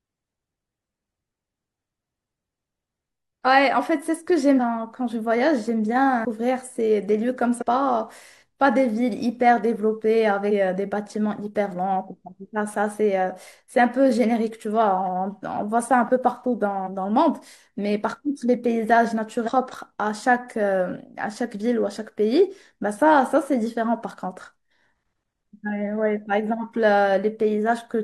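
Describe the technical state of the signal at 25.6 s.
At 25.6 s the speech signal is intact, with no audible technical fault at that moment.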